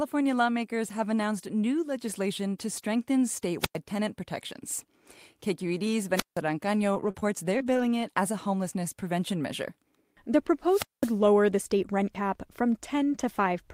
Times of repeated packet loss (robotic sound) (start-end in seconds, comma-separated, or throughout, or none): 6.93-7.92